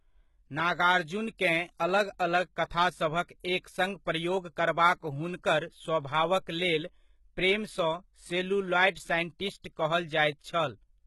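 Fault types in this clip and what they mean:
HE-AAC compression: treble on this speech sounds gritty and lispy, with nothing above 11.8 kHz, likely from heavy HE-AAC coding near 16 kbps rebuilding highs by band replication.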